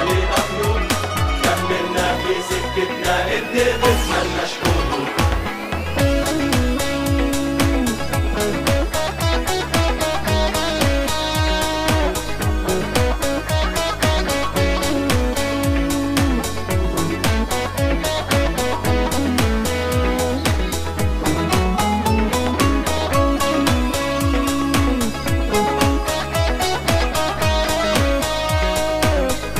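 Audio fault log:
2.06–2.23 s, loud pop: two sharp pops in quick succession, peaking about 5 dB above the surrounding sound, which carries on underneath without a break. A sudden voltage step or pulse, likely from a plug being seated, a switch, a static discharge or a driver glitch, was added to the signal. The following circuitry shaped each pulse into a brief thump, so the pair stands out abruptly over the audio.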